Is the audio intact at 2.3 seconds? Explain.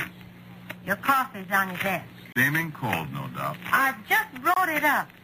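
No. Two separately encoded pieces were joined without trimming the encoder's start delay and last-frame padding, leaving a gap at a join of encoded pieces from 2.32 to 2.36 s. A gap of about 32 ms opens in the sound, with smeared edges, then the sound resumes where it stopped.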